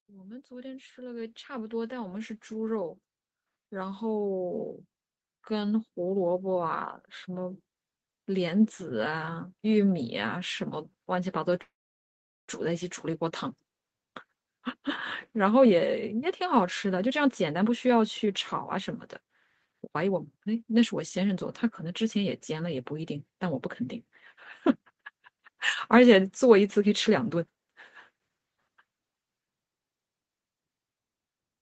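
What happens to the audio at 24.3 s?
Nothing goes wrong at 24.3 s; the speech there passes through intact, with only the ordinary 8 kHz top end of the Opus call path at about 24 kbps.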